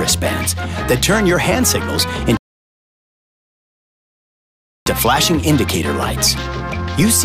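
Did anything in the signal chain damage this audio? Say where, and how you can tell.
Yes. At 2.37 s the sound drops abruptly into silence, then at 4.86 s it picks up again at exactly the point where it broke off, with nothing skipped. That is a rebuffering stall at the playback stage, fed by a slow network delivery. The player used up the audio it had downloaded and waited for more before continuing. No content is lost, but about 2.49 s of dead air is inserted.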